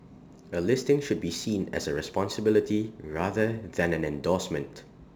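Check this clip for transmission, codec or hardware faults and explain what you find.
One fault runs throughout the speech: crude rate conversion. Samples were repeated with no filtering, which fits a 44.1 kHz to 48 kHz conversion. This adds a gritty, inharmonic fizz about 30 dB below the speech that rides on loud and bright syllables.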